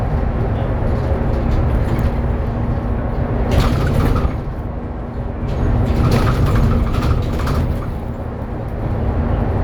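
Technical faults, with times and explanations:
7.61 s, overlap between stream segments: two adjacent stream segments carried time stamps that overlapped, so the player trimmed about 8 ms that was never actually duplicated. The waveform jumps across the gap and is heard as a brief click or tiny skip at the segment boundary.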